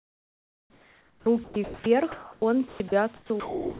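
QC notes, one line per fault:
0.00 to 1.86 s, sound chopped by the voice detector: the speech breaks up repeatedly, with about 1.6 s of this stretch given over to a steady synthetic fill. The likely cause is a sender-side voice detector toggling on and off, taking quieter syllables and word edges for background and letting comfort noise stand in for them.
2.12 to 2.42 s, sound dropped by the voice detector: the speech gives way to steady, featureless noise for 0.3 s, with roughly a tenth of a second of actual speech lost, before the voice returns. This likely comes from the detector treating a soft passage as background and pausing transmission, so the receiver filled the gap with comfort noise until the detector triggered again.
2.68 to 3.80 s, sound chopped by the voice detector: the same choppy pattern returns through to the end, with about 0.7 s of the speech replaced by synthetic background. 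The likely mechanism is again the detector flipping between sending and not sending, cutting out low-level parts of the speech; heard against a narrowband call path with nothing above 4 kHz.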